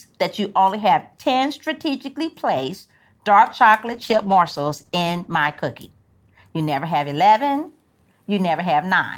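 Just after "strategically placed dark", at 3.95 s, a call bitrate drop sets in and lasts until 5.67 s. The bandwidth estimate fell and the encoder was pushed to far fewer bits, which fits a fall from 64 to 14 kbps held for about 1.65 s. Speech turns coarse and watery, with the top end cut away. Unlike packet loss, the audio never gaps or stutters, and the quality recovers before the clip ends.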